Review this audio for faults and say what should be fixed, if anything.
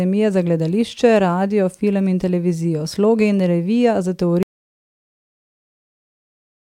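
The input signal was likely lost partway through, through a disconnected device, a dropped link or a stray mute, while the recorder kept writing silence. This produces an audio dropout to silence at 4.43 s, right after "in revija za": the speech cuts off mid-flow, and from there to the very end there is silence with no room tone. Anything said after that point is gone.

Securing connections and mute controls, and watching live input meters during recording, would catch this before the take is lost.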